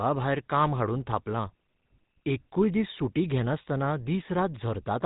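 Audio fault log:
Throughout, GSM full-rate codec: the whole thing has that gravelly, buzzy edge you get from old mobile calls, and it's plainly audible here. The codec models the vocal tract and drives it with a sparse, regularly spaced pulse train, so the fine detail of the excitation is gone and the speech comes out rasping. Nothing gets through above 3.8 kHz either, which dulls it further, all of which fits the 13 kbps full-rate scheme.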